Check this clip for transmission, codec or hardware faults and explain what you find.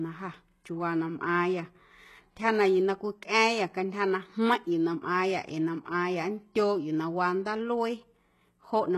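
One codec fault runs through the whole speech clip. Throughout, likely HE-AAC compression, consistent with about 16 kbps, rebuilds treble by copying lower bands upward, leaving heavy damage, gritty, metallic or lispy s sounds and nothing above 12.3 kHz.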